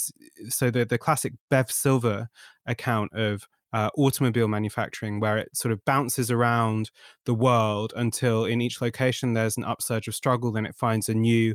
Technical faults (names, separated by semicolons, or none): none